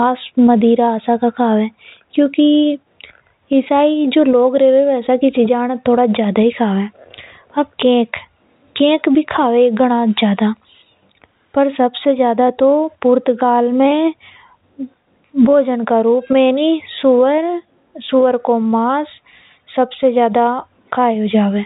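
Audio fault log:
No faults turn up anywhere in this speech recording. G.711 telephone coding is audible as a bandwidth that stops at about 3.8 kHz, with at most a faint hiss that tracks the signal level, which fits 64 kbps mu-law.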